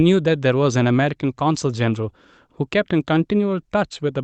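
The speech shows no technical faults; its top end stops at 8 kHz, as expected of audio carried over the WebRTC call path with the Opus codec.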